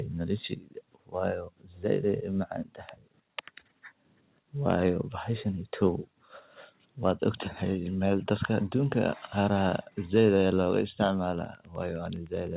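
From 4.70 to 4.73 s the loudest peak turns briefly harsh and crackly, with its tops flattened about 2 dB beyond the converter's limit, on only a small fraction of samples. This is likely microphone overload: the input level was set high enough that the converter ran out of range.

At 9.69 s, and again at 10.71 s, the whole signal, including the background, drops abruptly, first by about 2 dB and then by about 3 dB. These are likely microphone volume stepped down events, where the call software cut the device's input gain in discrete steps rather than fading it.

From 11.44 s to the end there is Wi-Fi interference. A faint, regular ticking sits about 35 dB below the signal and repeats every 102.4 ms, close to ten times a second. It comes from a nearby Wi-Fi radio's beacon bursts being rectified in the audio circuitry. All of this is heard through a narrowband G.711 call path with nothing above 4 kHz.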